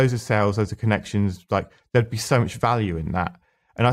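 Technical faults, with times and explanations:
The speech signal shows no technical defect at any point, with continuous and undisturbed audio across the whole recording.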